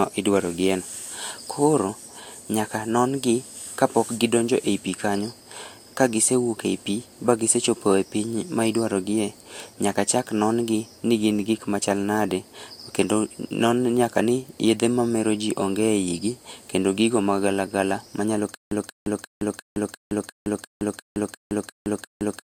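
From 18.55 s to the end, a stutter with silent gaps: the same 186 ms burst repeats every 350 ms amid digital silence, likely a stalled stream.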